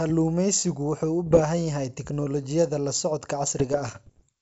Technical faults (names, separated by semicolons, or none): bit errors on an ADPCM link